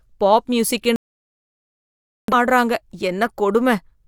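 Digital broadcast dropout from 0.96 to 2.34 s: the receiver stopped getting valid frames and muted, so speech cuts to silence until good frames return.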